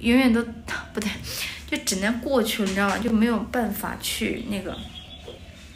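Chunks out of order at 3.02 to 3.10 s, and again at 5.06 to 5.10 s. In the first, one 20 ms chunk arrived late and plays after the three chunks that should have followed it. In the second, a 20 ms chunk plays after the one that should have come next. No audio is missing, but each reshuffle leaves three hard joins, so the sound briefly jumbles.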